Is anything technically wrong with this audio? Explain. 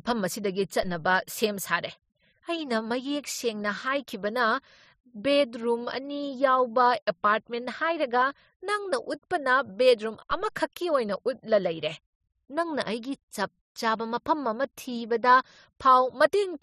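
Yes. A DC step occurs at 0.83 s, just before "ꯁꯦꯝ ꯁꯥꯔꯦ", and again at 10.31 s, between "ꯍꯥꯏꯔꯒ ꯅꯪꯅ ꯎꯠꯄꯅ ꯕꯦꯗꯔꯨꯝ" and "ꯑꯃꯈꯛꯀꯤ ꯑꯣꯏꯅ ꯎꯠꯂ". Each time the waveform's zero line jumps abruptly and then drains away, as a high-pass near 2 Hz would pull it back. Each jump is heard as a low thump under the speech.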